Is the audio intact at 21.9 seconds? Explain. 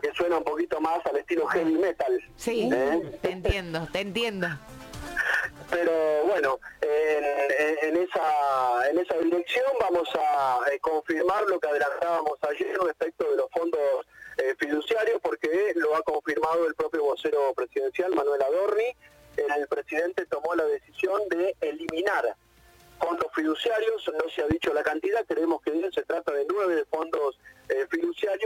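No. A single loud pop hits from 21.89 to 21.92 s, a sharp thump standing roughly 15 dB above the surrounding sound, which carries on beneath it without a break. The likely cause is a sudden voltage step or pulse, from a plug, switch, static discharge or driver glitch, getting added to the signal. The circuitry after it rounds the pulse off, giving the brief, percussive burst heard there.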